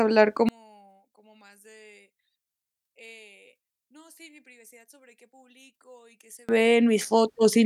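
From 0.49 to 6.49 s the speech collapses to a faint trace, about 32 dB down, likely one channel inverted, cancelling the centred voice in mono.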